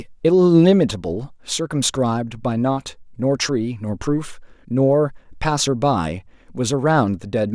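No technical faults can be heard at any point in the recording.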